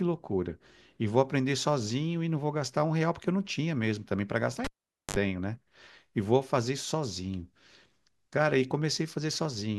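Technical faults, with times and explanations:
4.64–5.17 s, cable pulled and plugged in: a pop at 4.64 s opens about 470 ms of near silence as the live lead comes out, then roughly 54 ms of 50 Hz mains buzz while only the plug tip touches and the shield isn't yet grounded, then a second pop as the speech returns. That buzz between the two pops is what sets it apart from a plain dropout or an isolated click.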